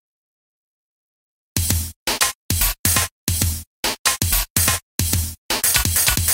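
No technical faults are audible anywhere in this recording.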